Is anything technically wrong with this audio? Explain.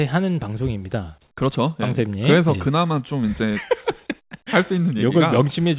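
No, nothing is technically wrong with this speech recording: it has the narrowband character of a normal phone-style call path, with no content above 4 kHz, which fits a G.711 A-law codec at 64 kbps working as intended.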